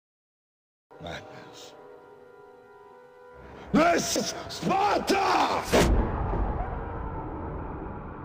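Damaged data in a compressed stream shows up as three brief glitches in this audio, at 0.91 s, 4.16 s and 6.67 s. Each is an instant of bad bytes in the encoded file. The decoder misreads or rejects the frame there, loses its place in the bitstream, and has to hunt for the next valid frame header before normal playback resumes. The result is a short, unnatural chirp or blip at each point.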